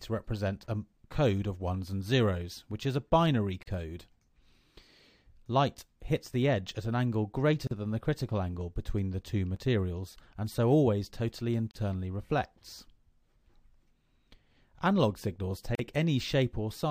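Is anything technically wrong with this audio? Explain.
Yes. The audio has two kinds of dropout.

Gaps at a join of encoded pieces open at 3.63, 7.67, 11.71 and 15.75 s, each about 40 ms long and exactly 4 s apart. Separately encoded segments were butted together, so encoder delay and last-frame padding remain as silence, with edges softened by the codec.

A block of digital silence hits at 9.56 s, only 5 ms long. The sound cut out, probably from an output buffer not filled in time, so it sounds like a hard-edged tick rather than a hole. Unlike the joins, it is isolated, off the 4-second grid, and has unsmeared edges.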